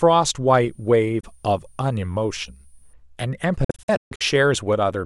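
From 0.58 s to 2.93 s, a switching power supply somewhere in the chain leaks a switching whistle into the signal. It sits high, between 9.3 and 9.4 kHz, drifting slightly within that band, roughly 40 dB below the speech. It is thin and quiet rather than loud.

Inside that stretch, at 1.20 to 1.25 s, the speech cuts out for about 23 ms and then resumes further on, as though it had kept playing through the hole. The same thing returns more heavily from 3.64 s to 4.22 s, where several gaps adding up to about 325 ms break up roughly 560 ms of speech, the longest lasting about 139 ms. This is likely a Bluetooth dropout, with packets arriving too late at the headphones and being discarded. The first gap fits a single lost packet. The later cluster sounds choppy and stuttering.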